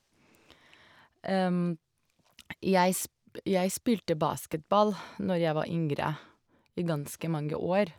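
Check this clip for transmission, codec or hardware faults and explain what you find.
One fault appears. At 4.53 s a tick interrupts the speech: a block of digital silence about 2.7 ms long, where an output buffer, apparently 128 samples, went unfilled and dropped abruptly to zero.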